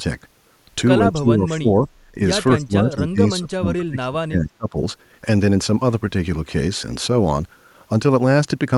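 From 1.13 to 1.88 s and again from 2.56 to 4.76 s, the speech sinks by roughly 25 to 30 dB, likely speech suppressed in double talk, the echo canceller ducking this talker while the far side spoke. At 2.97 to 3.02 s a faint scrap of the voice returns 270 ms late, some 30 dB down, likely an echo leak from a loudspeaker end.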